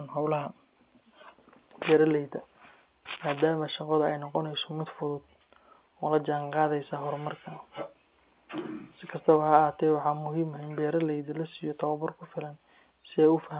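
No technical fault can be heard in this speech recording; the cut-off at 4 kHz and the faint quantisation noise that rises and falls with the signal are simply what A-law telephone coding at an 8 kHz sample rate produces, and that path is working as it should.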